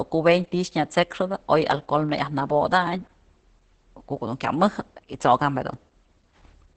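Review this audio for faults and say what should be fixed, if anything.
Opus voice compression runs through the whole speech clip. The SILK coder's coarse excitation leaves the speech muffled, hoarse and slightly robotic, which fits roughly 10 kbps in wideband mode. A spectrogram shows a hard ceiling with nothing above 8.7 kHz and smeared harmonics. Encode at a higher bitrate to prevent it.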